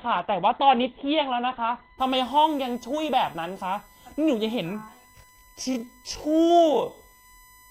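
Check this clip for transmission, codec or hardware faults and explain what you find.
Three faults are present: a steady USB whine, a low-quality opening from an adaptive stream, and a slowed final section.

USB whine runs the whole clip as a fixed 1 kHz tone about 30 dB below the speech. Current drawn in 1 ms USB frames leaks through power or ground into the audio path. On a spectrogram it is a thin horizontal line at 1 kHz that persists through pauses.

Adaptive stream starting at a low bitrate affects 0 to 2.0 s. The player began on a cheap version of the stream, which fits a very low Opus rate near 12 kbit/s, then switched up, consistent with about 64 kbit/s. Until 2.0 s the speech sounds dull and garbled. On a spectrogram the upper band stays empty, then fills abruptly at 2.0 s with no gap.

A time-stretched section runs from 4.71 s to the end, at 0.52 times the original speed with the pitch unchanged. 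The likely cause is software lengthening the audio by repeating short grains. It sounds dragging. In the waveform, syllable envelopes become drawn out with repeated fragments, and spectrogram harmonics stay at the same height while stretching horizontally.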